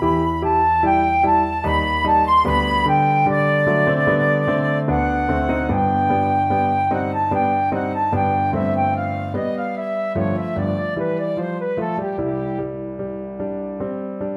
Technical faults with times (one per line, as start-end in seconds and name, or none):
none